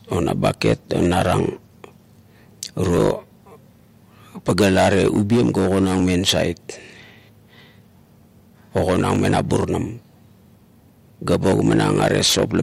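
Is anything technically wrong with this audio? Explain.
Yes. From 2.84 s to 12.32 s, clock drift buffer slips likely occur: two devices' clocks disagree by roughly 400 ppm, so the buffer between them slowly fills or empties, dropping or repeating around 70 samples every 3.16 s. About four regular clicks break into the speech.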